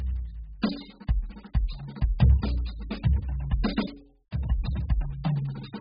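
From start to finish the music sounds dull and smeared, with nothing at all above 5 kHz, and sustained notes carry a warbly, fizzy texture. That's heavy damage of the kind you'd get from AAC compression, likely AAC-LC squeezed to a very low bitrate, which fits something around 8 kbps. At that rate the encoder throws away the whole top end and starves the remaining bands, so they're coded crudely and smear together.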